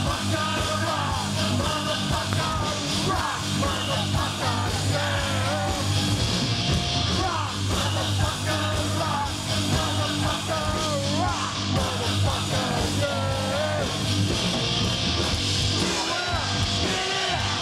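A sharp loud pop cuts through the sound at 2.33 to 2.35 s, standing well above the surrounding level, and a softer double pop follows between 5.81 and 6.00 s, only slightly louder than the sound around it. A third, clearly prominent pop lands at 12.71 to 12.73 s. Each time, the sound continues underneath. The likely cause is a brief voltage step or spike, perhaps from a switch, a plug or static, entering the signal path and being shaped into a pulse by the circuitry that followed.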